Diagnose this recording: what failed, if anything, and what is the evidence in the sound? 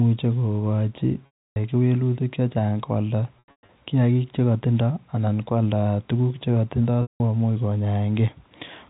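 Network stage: packet loss with pitch repetition. 300 ms drops out at 1.26 s, 240 ms in scattered bursts from 3.39 to 3.69 s, and 180 ms at 7.02 s, after "tuguuk che". The receiver repeats the last pitch period, giving a buzzy hold that fades away.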